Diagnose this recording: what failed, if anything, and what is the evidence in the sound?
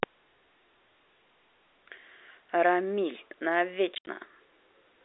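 Between 3.95 and 4.07 s the speech drops into hard-edged silent gaps: about 90 ms missing over 120 ms, the longest 70 ms. This is packet loss filled with silence at the network stage. The gap sizes fit 10 ms packets, and the narrow G.711 band around them is intact.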